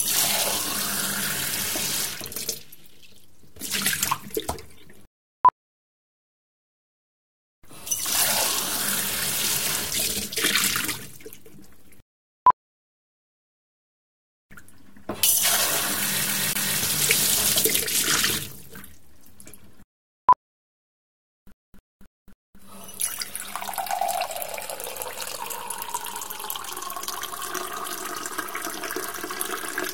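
At 0.88 s the sound jumps forward with no gap. This is a dropped buffer, likely an overrun: the software failed to read its samples before the hardware overwrote them, so roughly 20 ms of audio is lost and the two edges are butted together. The same skip recurs at 11.15 s. At 16.26 s the CD-stuck-on-one-turn fault begins. A 0.27 s section plays twice in a row with a brief mute at each jump, producing the quick, regular stutter of a skipping disc until 16.80 s. At 18.03 s another dropped buffer causes a larger jump of around 50 ms. From 21.52 to 22.60 s the disc fault returns, this time looping the same 0.27 s segment four times before playback continues. At 26.85 s a final dropped buffer gives one more short forward skip of roughly 20 ms.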